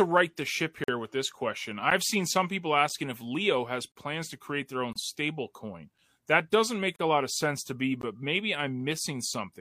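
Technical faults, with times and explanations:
0.84–0.88 s, 1.90 s, 3.92–3.96 s, 4.93–4.96 s, 6.96–6.99 s and 8.01 s, gap between stream segments: the speech drops into hard-edged silent holes of about 10 to 44 ms, for example between "with this question" and "seen some people", and between "doesn't make" and "a lot of sense". They fall near one-second boundaries because the segment time stamps don't meet, and the player pads each shortfall with silence while all the audio is kept.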